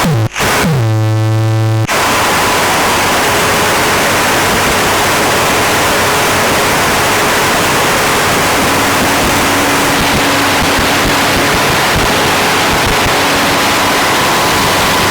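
From 0 to 9.95 s, periodic clock jitter at around 4 kHz modulates the converter clock, placing sidebands beside each component and giving a rough, metallic edge.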